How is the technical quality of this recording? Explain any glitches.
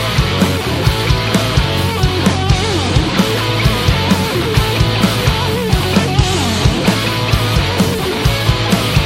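No glitches turn up anywhere in the recording. Nothing in it stands out as a technical problem.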